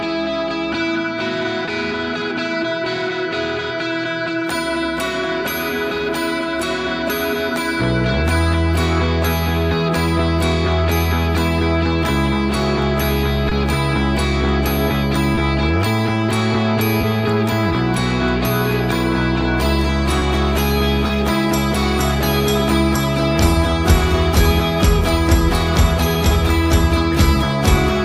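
Brief smears occur at 1.65, 13.49, 15.35, 17.01, 20.19 and 21.07 s. Each is short concealed packet loss: 20 ms went missing and was patched from the preceding sound.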